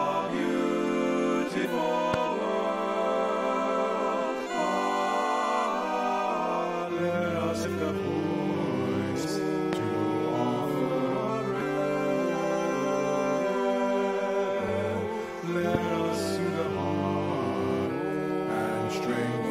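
At 1.64 s a short glitch appears, from damaged data in a compressed stream. Corrupt bytes make the decoder misread the frame. It loses sync and hunts for the next frame header. At 2.14 to 2.16 s comes a single loud pop, about 15 dB above the signal. The sound carries on underneath it. The same damaged-data glitch returns at 4.39 s and 7.64 s. A second loud pop follows at 9.73 to 9.75 s, about 20 dB above the signal. Further glitches occur at 11.60 s and 14.68 s. Each is brief and abrupt. A third pop, also about 20 dB, lands at 15.75 to 15.77 s. These sharp pops are likely caused by a sudden voltage step, such as a plug, a switch or static.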